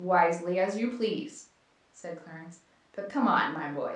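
No technical faults are audible.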